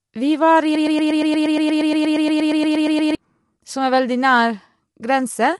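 Speech with low-delay AAC compression throughout: grainy, rough harmonics and nothing above 11.5 kHz, likely AAC-ELD at 32 kbps rather than a smeary MP3-style artefact. After "var i", a broken-record loop from 0.75 to 3.15 s repeats one 118 ms fragment exactly, about twenty times, unlike an echo. The stall, likely in the player, encoder or stream, loses the audio that should have played.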